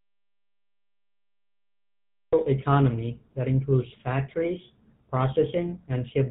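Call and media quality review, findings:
GSM full-rate codec, whole clip: buzzy, gravelly speech with nothing above 4 kHz. The codec models the vocal tract and drives it with a sparse, regularly spaced pulse excitation, so the voice comes out rough. The damage is plainly audible and fits the 13 kbps GSM FR codec.

Audio dropout to silence, 0 to 2.33 s: the clip opens in dead silence with no room tone, and the speech cuts in mid-flow at 2.33 s. The input was likely lost (device, link or mute) while the recorder kept writing silence. Whatever was said before that is gone.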